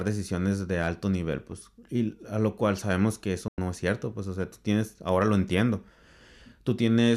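At 3.48 s, right after "cual sabemos que eso", the speech drops out in a digital broadcast dropout, returning at 3.58 s with "es cierto pues o". The receiver stopped getting valid frames and muted its output, so about 96 ms of the programme is lost. The cut comes in through a very short fade of about 3 ms, which sounds almost like a hard cut. The length fits roughly four consecutive frames being discarded.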